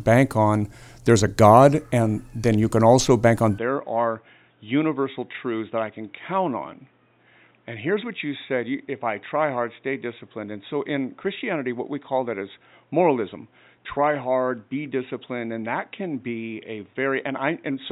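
At 3.58 s the speech turns dull and boxy through to the end. Nothing passes above 3.8 kHz. Level drops by roughly 10 dB, with faint new background noise well below it. No gap marks the change. The likely cause is an input switched to a poorer device.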